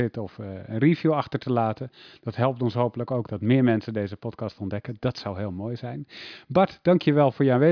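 No technical faults are audible.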